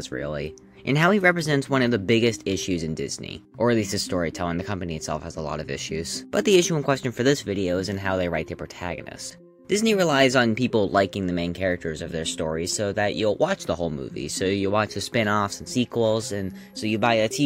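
Nothing is technically wrong with this audio, so there are no fault times or causes to give.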